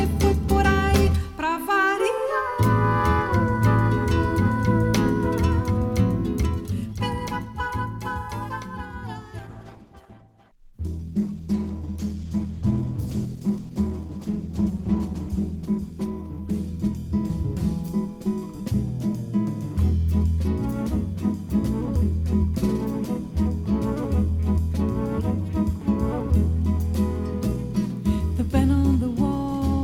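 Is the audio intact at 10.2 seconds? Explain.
No. A call bitrate drop spans 9.39 to 19.73 s: the bandwidth estimate fell and the encoder went from 128 to 12 kbps, so the audio turns coarse, watery and muffled, with the spectrogram's upper band emptied.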